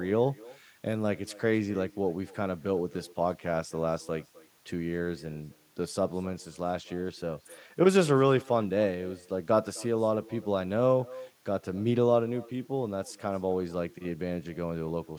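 Throughout the speech, every phrase is trailed by a faint, thin copy arriving about a third of a second later, roughly 23 dB below the talker. This is echo with no canceller: the far end's loudspeaker feeds its microphone, and nothing subtracts the returning signal.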